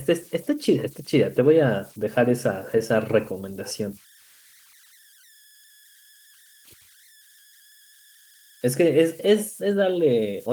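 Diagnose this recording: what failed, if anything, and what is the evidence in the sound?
Converter idle tones throughout: a faint whistle around 1.5 kHz, about 31 dB under the speech, as the undithered delta-sigma converter cycles through repeating bit patterns.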